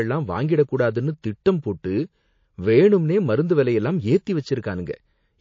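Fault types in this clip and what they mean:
MP3 compression: the speech sounds watery and swirly throughout, with dulled treble, smeared consonant onsets and chirpy s sounds. The likely cause is heavy MP3 encoding, fitting a bitrate near 32 kbps, where the encoder cuts the top band and flickers weak frequency lines.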